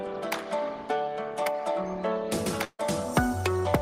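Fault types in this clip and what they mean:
Burst of packet loss: several consecutive packets went missing around 2.64 to 2.80 s, so the receiver stretched the last sound and faded it for about 144 ms, including about 50 ms of silence; playback then resumes with about 150 ms of audio skipped.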